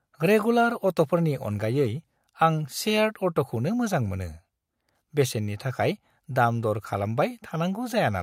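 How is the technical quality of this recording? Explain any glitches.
No glitches or technical faults are audible anywhere in the recording.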